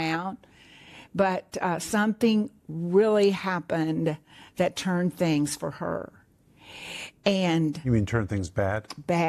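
Across the whole speech recording, no technical fault can be heard.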